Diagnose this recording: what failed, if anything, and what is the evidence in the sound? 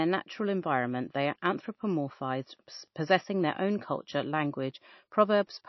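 Wi-Fi interference entered at the analogue wiring stage. A faint tick repeats every 102.4 ms, about ten times a second, for the whole clip. It sits roughly 50 dB below the speech. A nearby Wi-Fi radio's beacon is being rectified by the audio circuit.

The codec stage shows damage across the whole clip. Nothing reaches above 5.8 kHz, so the speech sounds dull. A watery, swirling texture is plainly audible. This likely comes from MP3 compression at a bitrate near 28 kbps. That starved the encoder, so it cut the treble and dropped weak detail.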